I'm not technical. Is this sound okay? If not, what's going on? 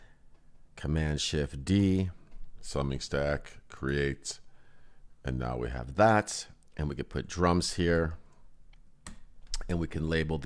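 No. From 2.52 to 5.78 s there is a wrong sample rate: the sound plays about 8% slower and 1.5 semitones lower, consistent with 24 kHz audio played at 22 kHz.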